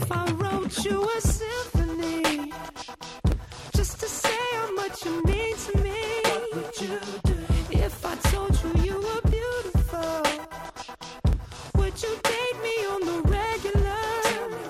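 A run of periodic USB or driver dropouts starts at 1.30 s and repeats every 2.0 s through 13.33 s, about seven in all. Each one punches around a millisecond of silence into the audio, so you hear evenly spaced little ticks.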